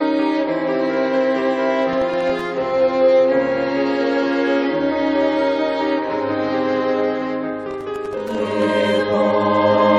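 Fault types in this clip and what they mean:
Processor overload crackle: at 1.93–2.46 s and 7.71–8.62 s the music tears into gritty crackle as the processor misses deadline after deadline on tiny buffers, which fits buffers of under a millisecond. Each miss leaves a hard-edged silent gap, and the second burst runs longer.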